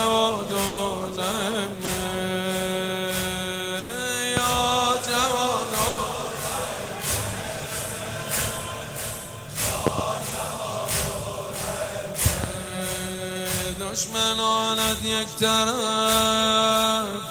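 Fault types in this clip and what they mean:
Burst of packet loss: A run of packets went missing, so the receiver stretched the last sound for 100 ms at 0.67 s and 3.79 s and 80 ms at 5.89 s, letting it fade before the audio jumps ahead with that stretch lost. On a waveform, the envelope dies away smoothly rather than dropping to zero. On a spectrogram, the last frame's partials or noise band smear out flat and dim, then the pattern restarts abruptly.
Short concealed packet loss: About 20 ms failed to arrive in time at 1.85 s and 10.29 s, and the decoder covered the hole by extrapolating the preceding sound, then blending back into the real signal. Each one is heard as a brief smear or wobble. On a spectrogram, a narrow vertical slice shows stretched, blurred content with a slight discontinuity at its edges.
Loud pop: A sharp transient, likely from a voltage step such as a plug, switch, static discharge or driver glitch, sits about 20 dB above the sound: a single pop at 4.37 s and double pops spanning 9.87 to 10.01 s and 12.26 to 12.47 s. 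The sound continues beneath each one. The waveform shows tall isolated spikes, and the spectrogram shows bright full-height vertical lines.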